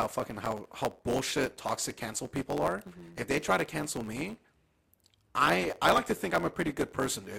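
Speech runs throughout with a block size mismatch (truncated). A steady buzz near 91.9 Hz sits under the whole clip, and the speech moves about 1.07 times too fast while its timbre stays normal. The writing stage hands over longer blocks than the next stage reads, fitting 512-sample blocks, so each block's tail is discarded. A resampling or clock error would also speed things up, but it would shift the pitch and leave no block-rate buzz.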